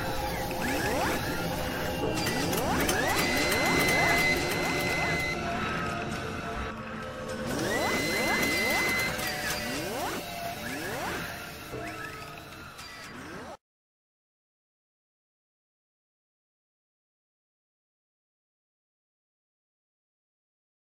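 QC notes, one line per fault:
3.73–6.71 s, doubled audio track: a second full-band copy of the sound runs about a second behind the original, a few dB quieter, with no decay or room colour, and it cuts in and out abruptly. The likely cause is a slower duplicate capture path or misaligned edit.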